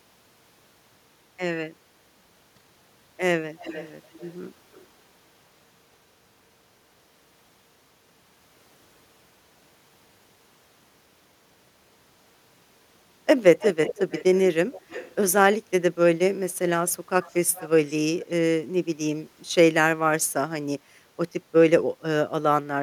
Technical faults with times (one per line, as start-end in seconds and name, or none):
3.59-4.37 echo leak
4.73-4.85 echo leak
13.59-14.40 echo leak
14.72-15.15 echo leak
17.22-17.94 echo leak
18.19-18.31 echo leak